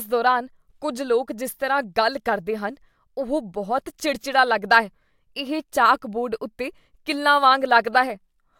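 No technical faults can be heard in this recording.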